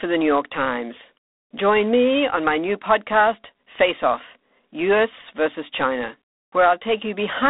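G.726 ADPCM damage runs throughout: each sample is sent as a coarse difference from an adaptive prediction, and the rasping hiss that rises and falls with the speech is plainly audible, which fits 24 kbit/s. The speech sits in a 200 Hz to 3.7 kHz line band, with nothing above 3.9 kHz.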